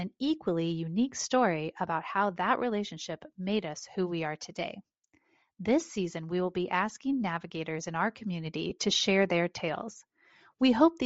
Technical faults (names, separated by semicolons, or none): Bluetooth LC3 compression; lost LE Audio frames